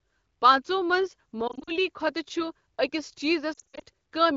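A speech clip with two patches of warbling, briefly smeared sound: from 1.48 to 1.71 s just after "پانٛژھو منٛز", and from 3.53 to 3.82 s. Both are lost AMR speech frames, where the decoder covers each gap by repeating the last good pitch and vocal-tract settings with falling gain. The losses are scattered in short runs of 40 ms and 60 ms at most, so the sound drops to near silence within those runs. The AMR wideband (HD Voice) coding itself sounds clear, at a rate that fits 15.85 kbit/s.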